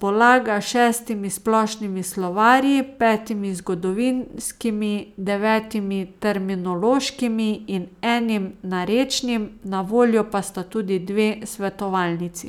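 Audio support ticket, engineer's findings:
Findings: no audio faults found in the speech recording.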